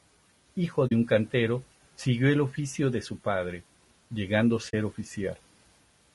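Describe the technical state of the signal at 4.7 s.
At 4.7 s the sound drops into a short, soft-edged gap from 4.69 to 4.74 s, right after "de su padre llegando", fading out and back in. This is AAC frame loss with muting: the decoder zeroed the missing spectrum, about 40 ms, consistent with two lost frames, and the overlapping windows smoothed both edges.

Around that gap the speech sounds rough and grainy, with noise filling the spaces between harmonics and a thin, artificial-sounding top band. The likely cause is low-delay AAC compression such as AAC-ELD; the damage fits a bitrate near 32 kbps.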